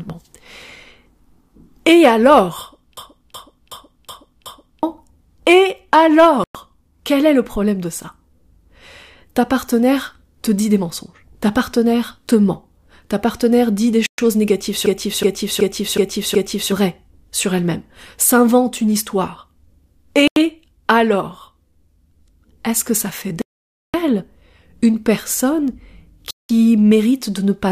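System hang loops at 2.97 to 4.83 s and again at 14.86 to 16.72 s break up this speech clip: each time, a 371.5 ms slice of audio repeats five times at about 2.69 Hz, a machine-gun stutter, which fits a 16384-sample ring buffer being replayed while the computer or driver froze, so roughly two seconds of speech are lost per event. Bluetooth stalls cut the sound to silence at 6.44 to 6.55 s (109 ms, just after "quel est le problème"), 14.06 to 14.19 s (121 ms, just before "ta partenaire dit des"), 20.28 to 20.37 s (87 ms), 23.42 to 23.94 s (522 ms, just before "que ça fait") and 26.31 to 26.50 s (187 ms), after which playback resumes. The likely cause is interference delaying packets until the headphones' buffer ran empty, with playback paused until the retransmitted packets arrived.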